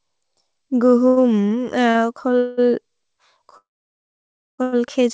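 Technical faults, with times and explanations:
1.08–1.19 s, 1.49–1.52 s and 1.90–1.96 s: short stall from a late packet, three times. Each time a packet arrived after it was due and the jitter buffer ran empty, so the receiver held the last sound for about 86 ms, 19 ms and 39 ms. The held stretch comes through as a slightly buzzy sustain or small dip. Playback then resumes from the same point, so no speech is lost, only delayed.
2.38–2.59 s: call audio freeze. For about 191 ms the receiver has nothing new to play, likely because packets were held up in transit. It continues the last sound as a fading buzz instead of cutting to silence. When the packets land, speech picks up exactly where it stopped, so a pause has been inserted and nothing is removed.
3.57–4.60 s: call audio freeze, about 1.0 s long. This is the same effect as the earlier freeze, but the wait is long enough that the concealment buzz dies away after a brief tail. 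Roughly 0.96 s of dead silence follows before the speech resumes intact. The result is an audible gap in the middle of the talk rather than a garble. Throughout, the wideband ceiling at 8 kHz fits a G.722 call path.
4.62–4.74 s: short stall from a late packet. Straight after the long freeze, one more packet is late and the receiver stretches the last sound for about 98 ms, giving a held, faintly buzzy sustain. The audio then carries on from the same place with nothing missing.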